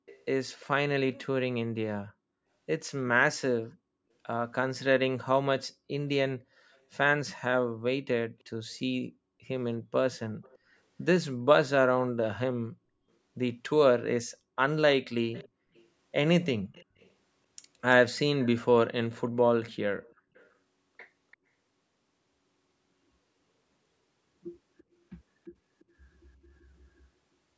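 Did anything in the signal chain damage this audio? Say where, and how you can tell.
Yes. There is an echo leak at the call-processing stage. A faint copy of the speech trails it by 340 ms at 0.06–0.65, 6.74–6.78, 10.18–10.58, 15.32–17.1, 18.45–21.37, 24.78–24.83 and 25.8–25.84 s. It sits far below the voice. The likely cause is a far-end loudspeaker echo that the echo canceller missed.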